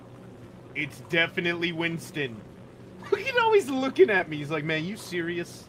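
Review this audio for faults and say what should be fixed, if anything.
At 4.17 to 4.21 s there is a short concealed packet loss: about 20 ms of the stream arrived too late or not at all, and the receiver papered over it by extending the preceding sound for roughly 19 ms before blending back into real audio. Unlike a plain dropout, there is no silent hole, only a brief smear or wobble. A larger jitter buffer or forward error correction on the link would prevent it.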